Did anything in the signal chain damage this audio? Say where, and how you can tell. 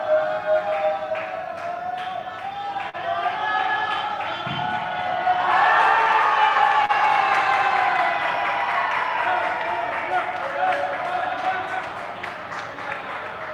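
Yes, network: a short stall from a late packet at 2.89–2.96 s and 6.86–6.91 s. The empty jitter buffer held the last sound 42 and 34 ms, with nothing lost.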